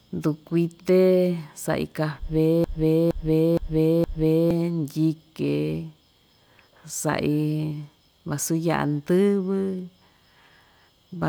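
A stall in the playback or streaming chain, most likely a player or encoder that stopped receiving fresh data and kept resending the last fragment it held, produces a broken-record loop from 2.64 to 4.51 s. A slice of speech about 0.47 s long plays four times back to back with identical timing and no variation, giving a mechanical stutter. The speech that should have filled those two seconds is missing, so the passage jumps ahead when the loop ends.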